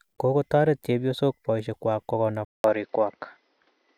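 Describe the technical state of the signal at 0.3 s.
At 0.3 s the signal is intact, with no audible fault at that moment.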